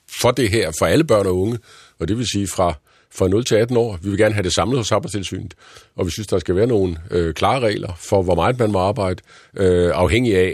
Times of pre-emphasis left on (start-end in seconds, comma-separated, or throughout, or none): 0.00-2.00